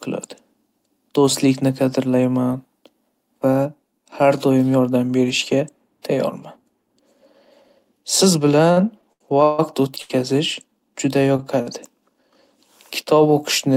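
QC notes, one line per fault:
8.71–9.60 s, repeated stalls (stutter). Packets kept arriving late, so the jitter buffer emptied four times in under a second. The receiver held the last sound to fill about 290 ms, the longest wait 153 ms. Nothing is lost, but the speech drags and stutters.
10.02, 11.36 and 11.62 s, short stalls from a late packet. Each time one packet came late and the buffer ran dry. The last sound was stretched by 81, 23 and 50 ms, then speech resumed where it stopped. A syllable hangs briefly, with a slight buzz or dip.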